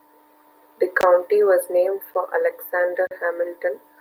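At 1.01 to 1.03 s, just before "was named", the speech drops into a 20 ms block of digital silence. A 10 ms block follows at 2.14 s, right after "was named", and a 40 ms block runs from 3.07 to 3.11 s. In each, a run of samples is replaced by zeros with no fade in or out, so the waveform jumps abruptly at both edges. The 10 ms gap registers as a sharp tick, while the 40 ms one is a brief audible hole.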